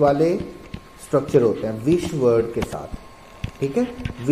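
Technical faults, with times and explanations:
Nothing stood out on listening to this recording.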